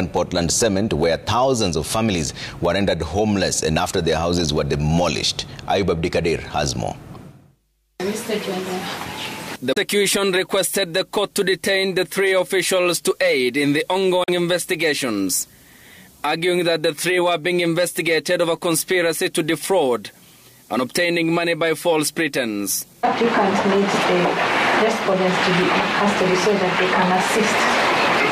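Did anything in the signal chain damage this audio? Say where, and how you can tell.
Yes, in the codec: damaged data in a compressed stream broke the decoder's frame sync, leaving short blips at 7.12–7.16, 9.73–9.78 and 14.23–14.29 s.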